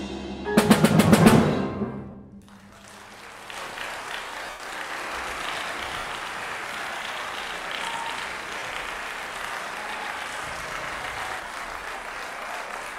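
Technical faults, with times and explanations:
2.11–2.14 s, 4.44–4.60 s, 5.99–6.04 s, 8.59–8.62 s, 11.80–11.82 s, lost LE Audio frames: Bluetooth LE Audio frames dropped, and the LC3 decoder filled each gap with the last spectrum with randomised signs, so tones smear into noise. The 4.44 s patch loses 140 ms scattered over 160 ms, with the longest run about 100 ms, and audibly fades.
4.90–11.40 s, doubled audio track: a second full-band copy runs roughly 150 ms behind, at about the same level, with no decay or room colour. It likely comes from the same audio being captured again by a slower path. It cuts in and out abruptly.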